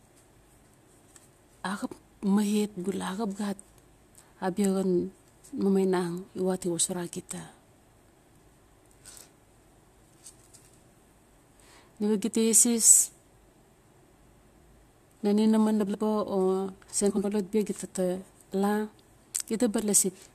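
A brief garbled flutter breaks the speech at 14.59–14.64 s, 15.80–15.95 s and 17.10–17.25 s. These are frames out of order: two adjacent blocks of 23.2 ms, then 69.7 ms, arrived swapped and played with halves exchanged, losing no time.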